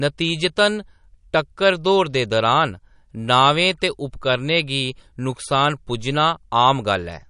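Likely MP3 compression at a low bitrate, around 45 kbps, starves the encoder throughout: the treble stops dead at 10.6 kHz, and weak components flicker, giving plainly audible watery swirl.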